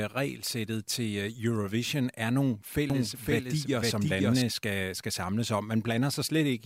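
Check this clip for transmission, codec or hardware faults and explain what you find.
One fault shows up. From 2.90 to 4.42 s there is a doubled audio track, likely from a second, slower capture path. A copy about as loud trails by about half a second, starting and stopping abruptly, with no decay.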